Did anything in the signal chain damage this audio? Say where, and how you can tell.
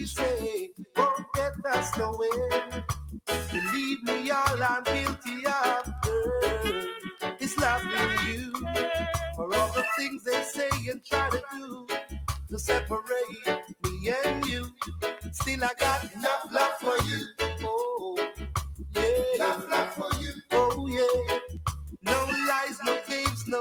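Yes. Across the whole clip the level pumps and flutters by around 5 dB: sustained parts sink while attacks punch through, and tails thin out early. This is a noise suppressor applied to music or sounds. A speech-oriented suppressor in the call-processing stage was left active, so it reads steady tones, ambience and reverb as noise and keeps pulling gain on them.

At eight points the suppressor cut the sound far more deeply: 0.68 to 0.97 s (about 19 dB), 7.07 to 7.23 s (about 11 dB), 10.95 to 11.11 s (about 18 dB), 11.45 to 12.12 s (about 14 dB), 13.26 to 13.46 s (about 8 dB), 13.62 to 13.84 s (about 20 dB), 16.06 to 16.21 s (about 10 dB) and 20.33 to 20.52 s (about 19 dB). In each case the sound was taken for noise and briefly turned down.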